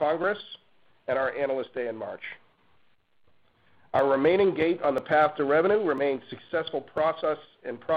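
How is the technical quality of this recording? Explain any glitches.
The recording has periodic USB or driver dropouts. Between 3.99 and 6.98 s, roughly a millisecond of audio is skipped about every 1 s, heard as a tick each time. The regular spacing separates this from random clicks, pointing to a recurring task stalling the driver.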